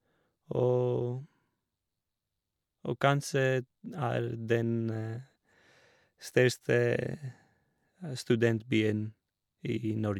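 No technical faults can be heard anywhere in the recording, which keeps a steady, continuous signal throughout.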